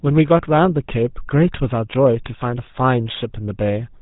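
From the very start, the speech runs through a GSM full-rate codec, and it's plainly audible. Everything above 4 kHz is gone, and the voice has that buzzy, gravelly grain. The codec rebuilds the voice by driving a vocal-tract model with a thin, regularly spaced pulse train, so the fine texture of the sound gets lost. It's what you'd expect from the old 13 kbps GSM speech coder.

Then at about 3.11 s, for roughly 66 ms up to 3.17 s, GSM bit errors break the sound into a short squawky, gargling burst. Corrupted bits are reaching the decoder and scrambling the filter, pitch or gain values, so the spectrum warps and the level jumps for a moment. The length of the burst fits a handful of damaged 20 ms frames in a row, a typical sign of a weak radio link.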